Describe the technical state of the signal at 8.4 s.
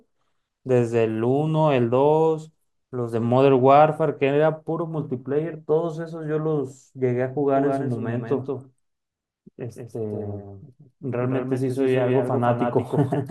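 At 8.4 s the speech has a flat, dry echo trailing about a fifth of a second behind, a few decibels quieter: a doubled audio track, starting abruptly at 7.57 s and running to the end. A second, delayed capture path likely mixes in this extra copy.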